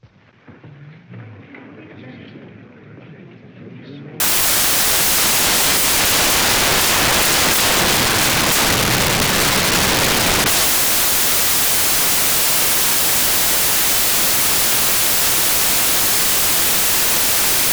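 From 4.20 s to the end of this recording of sounds, the samples are built from the wrong bytes: the reader misassembles each value, whether through a one-byte offset, swapped byte order or wrong alignment, so the rapidly changing low bits become the dominant part and the audio turns into loud, harsh broadband noise.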